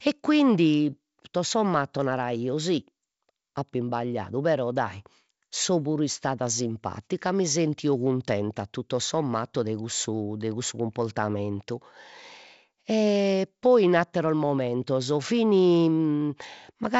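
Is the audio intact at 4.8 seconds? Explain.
Yes, the audio is intact at 4.8 seconds, with no fault at that moment.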